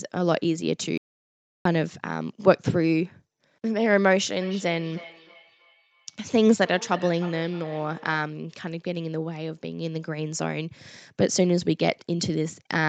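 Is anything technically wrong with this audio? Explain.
Yes, there are two faults.

From 0.98 to 1.65 s there is an audio dropout to silence. The speech cuts off abruptly and about 0.68 s is lost. The gap is dead silence with no room tone. The input was likely lost while the recorder kept writing silence.

From 4.42 to 8.39 s there is feedback echo between two devices. A second device in the room plays the call back into this microphone. Each phrase returns roughly every 0.3 s, thinner and ringing, peaking at about 18 dB below the speech.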